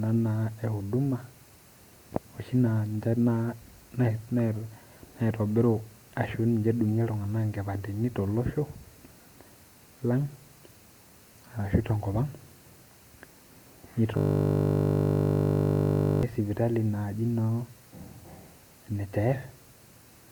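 At 14.17 s a system hang loop begins: the driver froze while the hardware replayed one 20 ms buffer until 16.23 s, turning the speech into a steady 50 Hz buzz.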